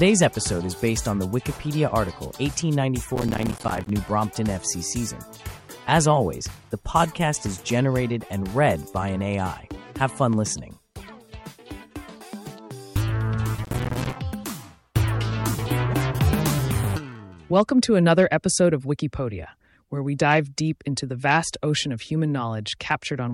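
Processor overload crackle appears from 3.16 to 3.90 s and again from 13.64 to 14.16 s. Dozens of short buffer deadlines are missed in a row, each leaving a hard-edged gap of silence, consistent with buffers of around 5 ms. Together the gaps form a gritty, tearing crackle over the sound.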